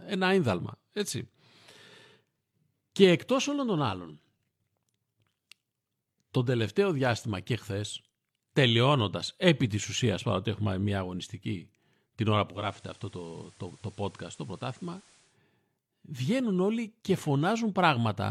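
At 12.47 s, just after "μια αγωνιστική την ώρα", the speech shows digital radio blending to analogue: the receiver loses its digital stream and cross-fades over about 0.25 s to the station's FM signal, returning to digital at 15.38 s. During the FM stretch the level drops by about 2 dB, and a faint hiss roughly 30 dB below the speech is audible.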